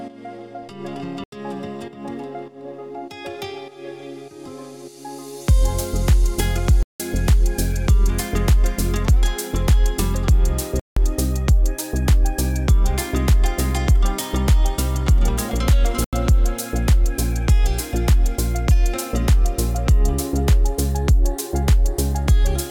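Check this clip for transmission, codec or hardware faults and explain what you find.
The clip has four blocks of digital silence: at 1.24 to 1.32 s (85 ms), 6.83 to 7.00 s (171 ms), 10.80 to 10.97 s (171 ms) and 16.04 to 16.13 s (85 ms). Each time, most likely because the output buffer was not filled in time, the sound cuts out and back with no fade. The two lengths fit 4096- and 8192-sample buffers. On a waveform each gap is a flat line; on a spectrogram it is a black vertical strip.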